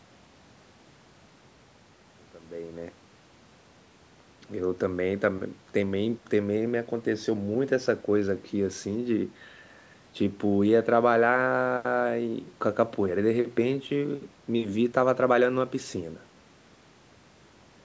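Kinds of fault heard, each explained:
Nothing in this speech stood out as a fault on listening.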